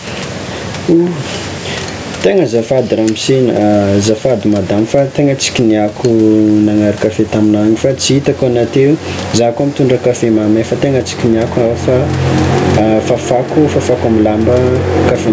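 All the way through the speech there's gain pumping: the level swings by around 15 dB, leaving everything squashed. That's likely the mic gain set far too high, with a fast limiter clamping down on peaks.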